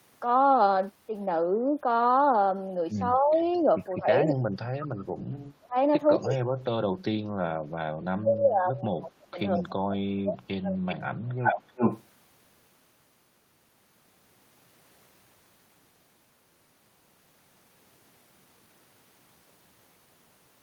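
From 3.14 to 3.4 s the speech dips by about 15 dB: speech suppressed in double talk, likely an echo canceller ducking the talker while the far side also spoke. Unlike a dropout, the sound sinks rather than vanishing cleanly. An echo leak follows at 3.42 to 3.6 s, a faint copy about 30 dB down, delayed 218 ms and likely residual loudspeaker pickup. Because it repeats earlier sound instead of removing it, it cannot be mistaken for suppression. Between 3.99 and 7.33 s the suppression returns, cutting the speech in pieces by up to about 30 dB for roughly 2 s in total. A brief 218 ms echo scrap falls at 4.28 to 4.34 s. From 8.02 to 11.74 s about 3 s of speech is again gated down by up to about 30 dB. From 10.88 to 12.04 s the echo leak becomes a 378 ms-delayed copy about as loud as the speech itself, which makes it stand out as a distinct doubled voice rather than faint reverb.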